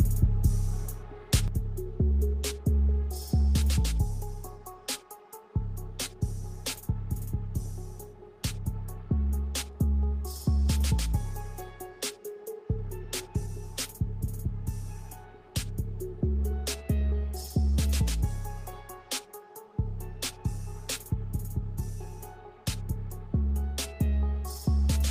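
At 1.48 s the level suddenly sinks by about 6 dB and stays down right through to the end. That fits one channel dropping out, most likely one side of a stereo feed going dead, so the mono sum only gets half of whatever both sides shared. It sounds like someone yanked a fader down a notch, and anything that lived only in the missing channel is simply gone from there on.

Then from 9.71 to 9.76 s there's a short stall from a late packet. The jitter buffer ran dry, so the receiver held the last bit of sound for about 30 ms until the packet showed up, then carried on from where it left off. Nothing is actually lost, but that moment hangs a touch too long with a slight buzz or dip, and everything after it sits about 30 ms later than it should.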